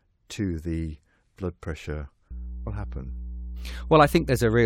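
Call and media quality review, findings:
Mains hum: steady 60 Hz tone with low harmonics from 2.31 s to end, about 10 dB below the speech. Ground loop or nearby transformer coupling power line into the signal path.

Abrupt jump ahead with small blip at 2.66 s. Likely stream segment skipped: one segment failed to load, player continued with next, dropping programme content.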